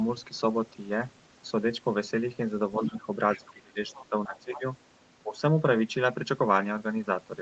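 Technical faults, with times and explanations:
2.78–3.08 s and 3.37–4.64 s, speech suppressed in double talk: the voice dips by about 10 dB, then about 20 dB, likely because the echo canceller ducked everything while both sides talked.
2.85–2.96 s, 3.32–3.58 s, 3.93–4.06 s and 4.25–4.61 s, other side's voice leaking through: faint scraps of a second voice, about 15 to 20 dB down, likely loudspeaker echo the canceller missed.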